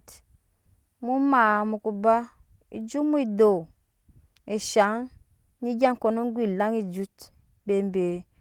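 Nothing in the recording stood out as a technical fault on listening.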